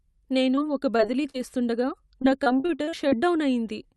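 Short concealed packet loss at 0.55, 0.97, 1.23 and 1.30 s: brief holes, each fitting one or two missing 20 ms packets, are patched by extending the preceding sound. They show as brief smears and slight waveform discontinuities.

Repeated packet loss (robotic sound) from 2.22 to 3.13 s: nine holes up to about 39 ms are concealed, roughly a quarter of the span. The speech turns choppy, with pieces missing, and shows striped, blurred harmonics on a spectrogram.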